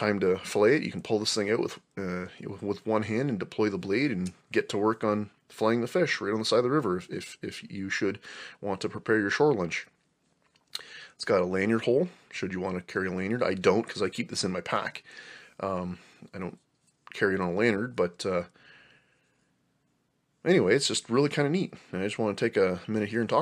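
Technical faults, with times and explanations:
No technical faults can be heard anywhere in the clip. There is nothing to list with a time or an explanation.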